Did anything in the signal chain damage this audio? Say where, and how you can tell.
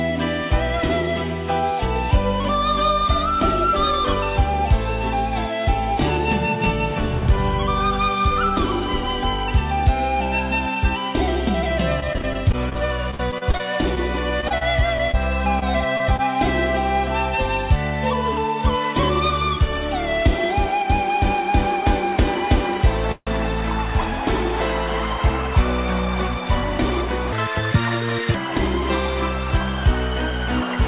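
Yes. From 12.0 to 16.2 s the sound turns choppy and robotic. This is repeated packet loss on the network: 25 short holes, the longest 44 ms, each patched by extending the previous sound. About 11% of that stretch is concealment.

At 23.12 to 23.29 s the sound stalls for 150 ms, tailing off into about 40 ms of silence, then resumes exactly where it stopped with nothing skipped. That is a call audio freeze, likely from delayed packets draining the jitter buffer.

Between 26.28 and 27.07 s the audio runs hurried, about 9% fast, while its pitch stays put. This is a jitter buffer speed-up in call processing. The receiver trimmed pitch-period slices, roughly 70 ms in all, to cut excess buffered delay.

From 27.32 to 28.35 s everything jumps high and rushed, playing 1.77 times too fast and roughly ten semitones sharp. This section at the wrong speed most likely comes from playback against a mismatched clock. 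The G.711 A-law call path's band limit at 4 kHz carries through all of it.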